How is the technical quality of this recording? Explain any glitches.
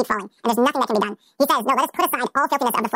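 The recording is technically poor. The whole speech clip plays at double speed and an octave too high, because the audio was read two samples at a time. The reader took each pair of samples as one frame, as if the stream held two channels or samples twice as wide. Each frame therefore covers half the intended time, which doubles the speed and raises the pitch 12 semitones.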